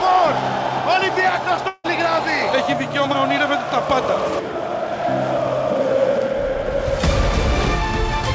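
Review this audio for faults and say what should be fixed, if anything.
From 1.68 to 1.86 s the sound breaks off. The receiver stretches the last moment into a fading buzz for about 160 ms, followed by a brief silence. Then audio resumes, with that stretch lost. The likely cause is a long network dropout. Through the call codec, nothing above 8 kHz is present. To prevent the dropout, use a steadier network link and add forward error correction or redundancy so lost packets can be recovered.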